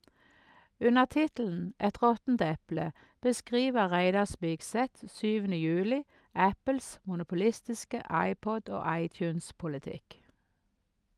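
Listening through this speech recording, nothing stood out as a technical problem.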